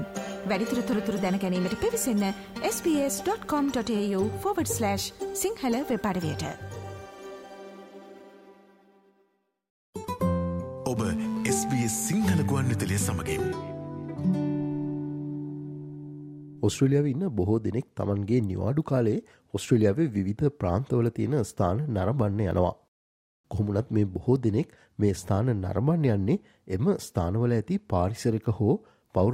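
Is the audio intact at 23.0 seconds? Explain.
Yes, at 23.0 seconds the audio is intact, with no dropout, click, distortion or other fault at that point.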